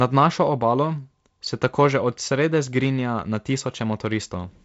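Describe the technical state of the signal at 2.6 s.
At 2.6 s the speech is intact with no fault present, carrying only the ordinary character of G.722 wideband telephone coding at what sounds like 48 kbit/s, with nothing above 7.7 kHz.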